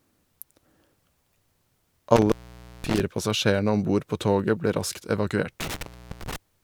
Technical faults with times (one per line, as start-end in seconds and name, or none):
2.16-3.00 intermittent contact
5.60-6.36 intermittent contact